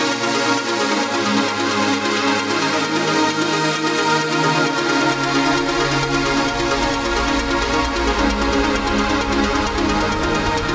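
The signal holds steady and intact for its whole duration, with nothing in the audio that points to a technical problem anywhere along the chain.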